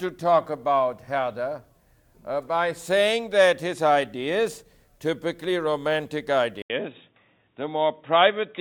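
An input switch to a poorer device, likely, hits at 6.62 s after an 80 ms gap; from there the audio loses everything above 3.8 kHz and sounds duller.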